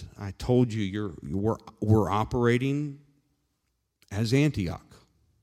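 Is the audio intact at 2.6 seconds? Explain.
Yes, the speech at 2.6 seconds plays through cleanly, with no dropout, click, distortion or other fault at that moment.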